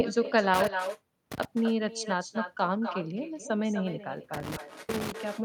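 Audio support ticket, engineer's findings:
Echo with no canceller, throughout: speech shadowed by a thinner copy roughly 0.3 s later, about 9 dB down. Far-end loudspeaker feeding its microphone, nothing suppressing it, so the talker's own signal returns after the network round trip.

Intermittent contact, 0.54–1.45 s and 4.34–5.12 s: audio drops out with crackle at the break edges, faint hiss while open, dropouts lasting 642 ms and 327 ms. Loose cable or plug briefly breaking the signal path.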